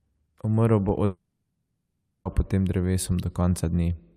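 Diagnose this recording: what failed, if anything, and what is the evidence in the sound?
The speech cuts out from 1.05 to 2.27 s, roughly 1.2 s gone. The last sound smears into a fading buzz, then about half a second of near silence before the speech picks up mid-stream. That's a long network dropout, likely packet loss with the receiver concealing until it gave up.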